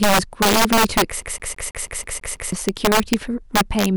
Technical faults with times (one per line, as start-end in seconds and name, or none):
0.00-3.97 integer overflow
1.22-2.52 CD stuck on one turn